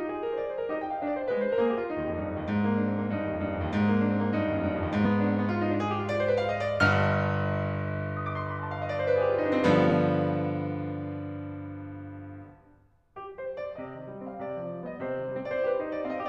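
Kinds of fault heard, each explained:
Compressed frames skipped: whole coded frames of the music never play, either missing or rejected as damaged, so it jumps ahead. At 5.04 s about two 23.2 ms frames go, and at 9.89 s about one.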